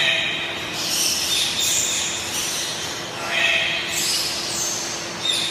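Chunks out of order at 2.35 to 2.44 s: one 23 ms block plays three blocks late, after those meant to follow it. Nothing is lost, but the sound briefly jumbles, with three hard joins.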